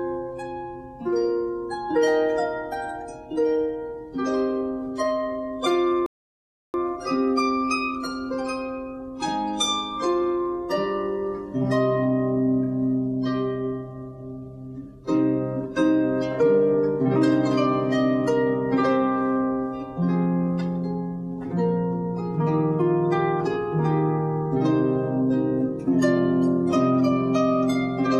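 At 6.06 s the audio halts and goes silent until 6.74 s, a rebuffering stall that adds roughly 0.68 s of dead time. The player used up everything it had downloaded and waited for more data before carrying on. What separates this from a dropout or a packet-loss gap is that the sound resumes at exactly the point where it stopped: no material is skipped, so the pause lengthens the clip rather than removing part of it.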